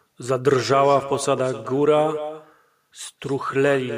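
Echo with no canceller runs from start to finish of this speech clip. Every phrase returns roughly a third of a second later as a second, fainter copy, about 13 dB below the direct talker. The far end is evidently playing the call through a loudspeaker that its own microphone picks up, and no echo canceller strips that pickup out, so the sound travels back across the network. The trailing copy sounds thinner than the original.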